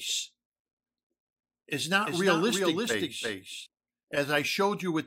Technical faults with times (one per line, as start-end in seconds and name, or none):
2.06-3.66 doubled audio track